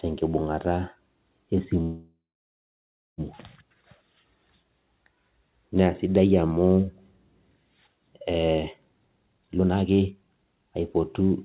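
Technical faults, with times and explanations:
1.82 to 3.21 s: call audio freeze. The speech halts and the last sound carries on as a fading buzz, dropping to silence for about the final second of a 1.36 s stall. The speech then resumes exactly where it stopped. The likely cause is packets held up in transit, leaving the jitter buffer empty. Nothing is lost, but the inserted gap shifts everything after it about 1.36 s later.
8.85 to 11.31 s: jitter buffer speed-up. With extra delay built up, the receiver catches up by repeatedly cutting out short slices of one or a few pitch periods. The speech runs at about 151% of its normal rate while keeping the same pitch, so it sounds hurried and compressed, with roughly a second and a half of audio removed. The narrow band, with nothing above 4 kHz, points to a G.711 mu-law call path.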